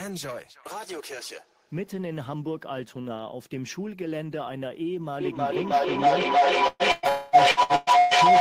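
From 5.2 s to the end, a feedback howl builds: a microphone-to-loudspeaker loop gains level each trip, ringing around 700 Hz, pulsing roughly every third of a second, and peaking about 14 dB above the speech. At 6.67 s and 6.92 s, bursts of packet loss occur: about 120 ms of audio goes missing each time, and the receiver stretches the last sound and fades it out, with a brief 30 ms silence in the first gap. From 7.09 to 7.36 s, the sound holds as a fading smear for about 240 ms before resuming further on, likely a long network dropout that discarded that stretch. Between 7.51 and 8.14 s, repeated packet loss leaves four patched holes, the longest 121 ms, covering over half the span and making the sound choppy and robotic.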